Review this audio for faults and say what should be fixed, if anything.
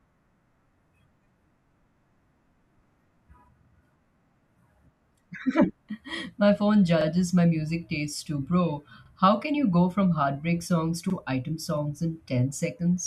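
Overlapping chunks show up as quick stutters at 0.88, 7.01, 9.06 and 11.10 s, where each 2-second chunk starts 44 ms early and replays that sliver of speech. Trim the overlap, or crossfade it properly, when stitching chunks back together.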